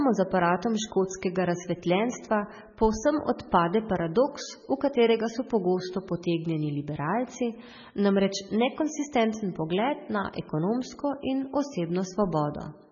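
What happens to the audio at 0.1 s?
At 0.1 s the speech is already dull and watery, and it stays that way for the whole clip. Nothing sounds above about 6.9 kHz. The likely cause is heavy MP3 compression, fitting a very low bitrate near 16 kbps. Starved of bits, the encoder cuts the treble and drops weak frequency lines that flicker from frame to frame.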